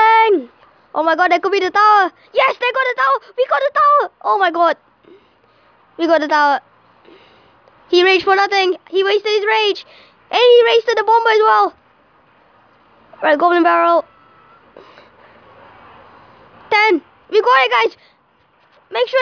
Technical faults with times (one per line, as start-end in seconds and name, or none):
none